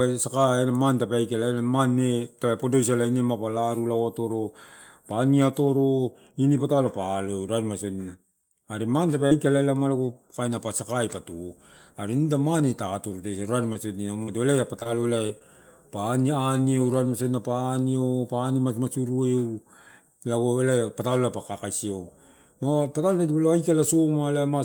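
Short concealed packet loss occurs at 9.27, 13.73, 14.23, 14.79, 14.83, 15.27 and 15.39 s, with 20 to 40 ms of speech arriving too late each time. The receiver bridges each gap by extending the preceding sound and then blends back, producing a brief smear or wobble, not silence. That continuity sets it apart from a plain dropout, which leaves an audible hole. The back-to-back losses at 14.79 and 14.83 s form one longer blur.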